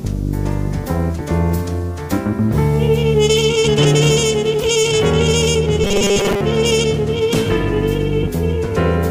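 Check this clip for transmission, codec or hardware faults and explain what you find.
One fault stands out: robotic sound from repeated short buffers between 5.84 and 6.41 s. The sound turns into a rigid, metallic buzz at 200 Hz that only loosely tracks the underlying audio. The likely cause is new audio arriving too slowly, so playback loops a roughly 5 ms chunk and skips most of the real signal. A spectrogram shows evenly spaced 200 Hz harmonic stripes; the waveform shows a short, identical cycle repeating.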